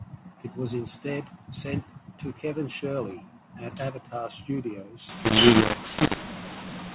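From 5.09 s to the end of the speech, the telephone audio is hit by a mu-law and A-law mix-up: samples coded with A-law are decoded as mu-law, so each 8-bit code maps to the wrong level. Loud and soft parts are rescaled inconsistently, giving harsh, gritty distortion, and the gaps between phrases fill with hiss. On the waveform, the pauses lose their flat silence and the peaks look jagged. On the spectrogram, broadband noise smears up to the 4 kHz band edge, which fits G.711 telephone coding.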